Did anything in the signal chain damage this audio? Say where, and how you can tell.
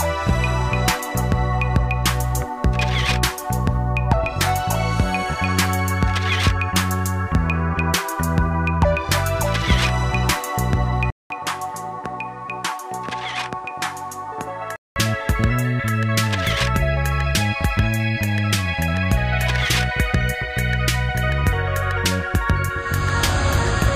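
Yes. At 11.10 s the sound cuts out for about 200 ms, then returns duller and roughly 5 dB quieter. Nothing remains above 12.2 kHz, and a new noise floor sits roughly 30 dB below the signal. At 14.96 s the earlier brightness comes back. The stage is the capture input. The likely cause is an input switched to a poorer device. A different microphone path brings its own narrower band, tone, gain and hiss.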